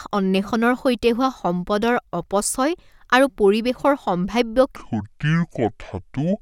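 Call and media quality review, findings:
Deep, dragging speech from 4.76 s to the end, after "আৰু পৰিৱেশৰ সম্ভাৱ্য". Section at the wrong speed: 0.571x, pitch roughly ten semitones down, likely a playback clock mismatch.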